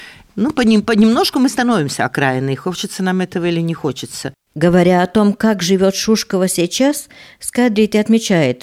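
Nothing stood out on listening to this speech recording.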